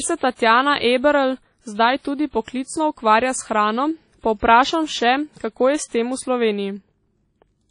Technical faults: WMA compression

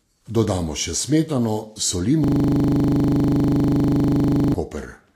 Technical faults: Vorbis compression; system hang loop

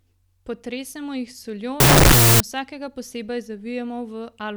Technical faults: wrong sample width

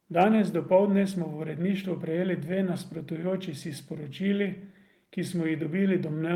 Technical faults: clock drift between sender and receiver; repeated timing corrections

